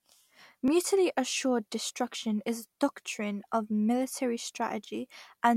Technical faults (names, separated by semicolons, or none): clock drift buffer slips